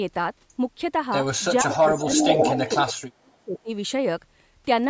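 From 1.64 to 3.7 s the speech drops in and out, for roughly a second and a half in total. The deepest dips are around 40 dB. This is speech suppressed in double talk, likely an echo canceller turning down both sides at once. From 1.68 to 1.76 s, and again from 1.92 to 2.92 s, a copy of the speech returns 512 ms late. It is slightly quieter than the speech at first, then about as loud. This echo leak likely comes from loudspeaker sound slipping past the canceller.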